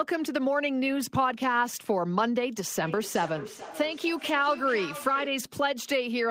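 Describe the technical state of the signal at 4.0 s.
At 4.0 s there is feedback echo between two devices, running from 2.83 to 5.53 s. Another device in the room replays this microphone's sound, which is picked up again. Each word returns about every 0.4 s, thinner and ringing, about 14 dB below the speech.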